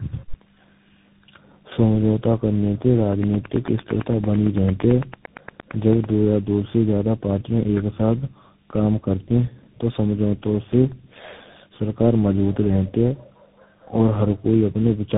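Tandem speech coding runs through the whole recording. The call passed through three speech coders in sequence, AMR-NB at 7.95 kbit/s, GSM full rate at 13 kbit/s and finally CVSD at 64 kbit/s, with G.711 links between them. Each coder re-encoded the previous one's already damaged output, so the errors compounded. Nothing is left above 3.8 kHz, and the speech sounds muffled, gritty and warbling, worse than any single link would produce.

A train of clicks runs from 3.13 s to 6.05 s. Sharp, similar pulses arrive at a steady 8.9 per second, around thirty in all, and peak about 10 dB above the speech. They tick through pauses as well as over the talking. The likely cause is interference from nearby equipment or a faltering interface injecting a pulse at regular intervals.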